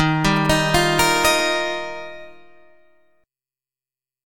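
GSM signalling bursts appear from 0.36 s to 1.41 s. A nearby 2G phone is exchanging brief signalling with the network, and the audio circuitry rectifies those radio bursts into the signal. The result is a galloping dit-dit-dit of short buzzes at about 217 Hz, the burst repetition rate. It sits noticeably under the main sound, somewhere around 15 dB below it.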